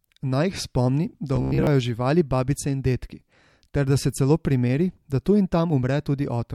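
Audio reaching the playback software too slowly is the likely cause of robotic sound from repeated short buffers in this speech recording between 1.36 and 1.67 s, right after "jih spomni" and just before "živali babice in dedki". To fill the gaps, a short chunk of about 15 ms is looped over and over while fresh material is dropped, with most of that stretch made of repeats. The looping stamps a fixed 66.7 Hz pitch onto the voice, so the passage becomes a stiff, metallic buzz that only loosely tracks the speech.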